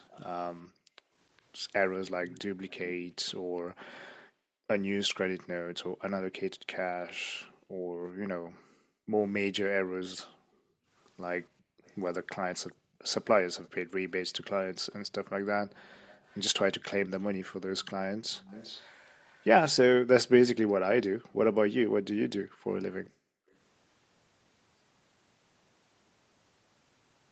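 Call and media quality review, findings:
Echo leak, 0.09–5.14 s, 11.6–13.7 s, 15.7–20.7 s, 23.05–23.54 s: delayed copy of the far-end sound about 405 ms behind, roughly 20–30 dB under speech. Likely residual echo passing the far-end canceller.

Background gated by the echo canceller, 0.68–13.03 s, 15.23–15.42 s, 21.12–23.49 s: room tone dips up to about 40 dB while the loudspeaker plays, then recovers. The canceller is suppressing the mic too hard.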